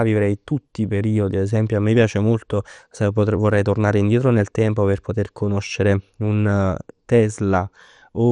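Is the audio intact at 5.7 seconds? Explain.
No. At 5.7 seconds, as throughout the speech, the sound is dull with nothing above 11.3 kHz and a gurgling, granular grit, likely MP2 compression at a rate near 64 kbps, starving its sub-bands of bits. Unlike a plain low-pass filter, the upper bands flicker and the remaining ones are coarsely quantised.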